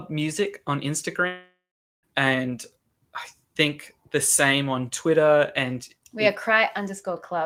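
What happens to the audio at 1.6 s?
At 1.6 s the audio is inside a long network dropout, likely, running from 1.27 to 2.05 s. The last sound is stretched into a fading buzz or hiss, then about 0.43 s of silence. It resumes at "and I think the", with about 0.76 s lost.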